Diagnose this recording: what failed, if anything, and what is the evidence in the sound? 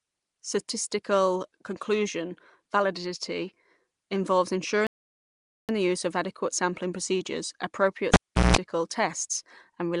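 At the codec stage, the speech was likely coded with Nellymoser compression. The damage is plainly audible throughout: a rough, hissy halo and a smeared, underwater quality, which fits a Nellymoser Asao stream near 44 kbps that starves weak bands of bits and fills them with noise.

A playback stall occurred in the buffer or playback stage. After "conclusion validity involves", the sound stops mid-flow at 4.87 s and stays silent for 0.82 s until 5.69 s, resuming with "the use of adequate". The player likely ran dry of data or had its thread blocked.

In the analogue wiring, the cable was pulled and plugged in. Just after "adequate sampling procedures appropriate", a pop at 8.14 s starts about 0.38 s of near silence. That gap includes a 175 ms burst of 60 Hz mains buzz while only the tip makes contact, and a second pop at 8.56 s marks the reconnection.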